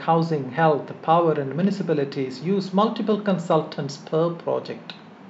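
No technical faults can be heard anywhere in this speech recording. Nothing in the audio calls for a time or a value to be noted.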